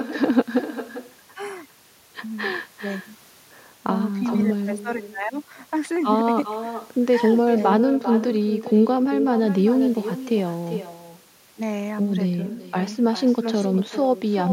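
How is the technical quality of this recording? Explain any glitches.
The recording is marred by one persistent fault: an echo with no canceller, present for the whole clip. Every phrase returns roughly four-tenths of a second later, about 11 dB quieter and thinner. The far end is evidently replaying the call through a loudspeaker into its microphone, with nothing subtracting it. Unlike room reverberation, which smears continuously into a tail, this is a distinct, delayed repeat of the speech itself.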